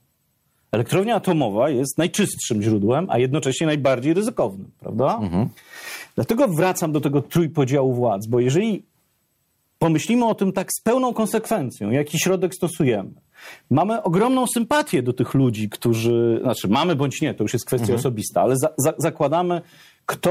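Gain pumping runs through the whole speech recording. The level breathes constantly. The swing is large, around 20 dB. Loud and quiet passages sit unnaturally close in level, and the sound feels squashed. The likely cause is input gain set far too high, with a fast limiter or compressor clamping down on each peak.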